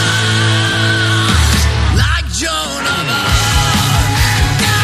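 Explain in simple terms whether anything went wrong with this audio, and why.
Nothing went wrong here.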